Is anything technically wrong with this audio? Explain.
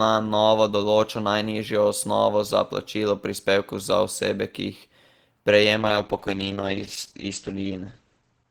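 Yes. At 5.79 s there is a call bitrate drop that lasts to the end of the clip. The bandwidth estimate fell, so the encoder was told to spend far fewer bits, going from about 32 kbps down to 9 kbps. It stays at that lowest rate for about 2.4 s. With so few bits, the coding turns coarse. The audio bandwidth also shrinks from 20 kHz to 8 kHz. The speech sounds rough, watery and muffled, and it never recovers before the clip ends.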